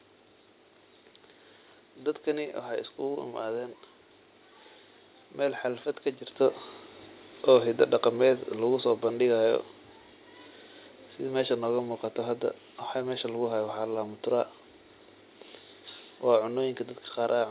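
From 7.48 s to 9.67 s the automatic gain falls: the gain control judges the input too loud, or its background noise too strong, and pulls its gain down by about 4 dB over roughly two seconds. The voice and the room noise behind it sink together, unlike the earlier change near 6 s where the talker moved. On a waveform the envelope tapers smoothly across that span. On a spectrogram every band dims evenly, still capped at 4 kHz, which fits a narrowband G.711 call codec.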